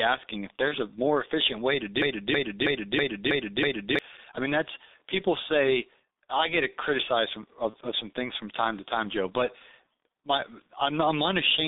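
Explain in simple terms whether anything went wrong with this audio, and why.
Several things went wrong. The whole recording passed through the G.723.1 codec, an old internet-phone codec that squeezes speech very hard. Only a narrow band of roughly 250 Hz to 3.7 kHz survives, so the speech sounds muffled and hoarse, with smeared consonants.

VoIP packet loss concealed by the speech codec occurs twice: at 0.68–0.75 s, between "asking if" and "a more efficient way", and at 7.70–7.76 s, between "I get criticized from" and "of some things from". Each gap fits about 30 ms of missing audio. The decoder filled it by guessing from the preceding sound, producing a brief buzzy or noisy smear.

From 2.02 to 3.99 s, right after "more efficient way to" and before "I mean that's people", there is a broken-record loop. A chunk of about 0.32 s plays six times back to back. The likely cause is that the stream stalled and kept resending its last piece, so the speech that belonged in that stretch is lost.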